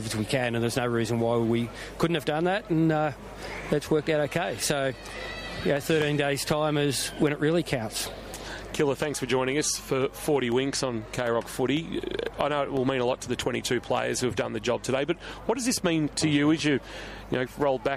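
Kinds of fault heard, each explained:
Periodic USB or driver dropouts: brief gaps of silence, about a millisecond each, recur every 0.25 s; their strict regularity distinguishes them from random clicks.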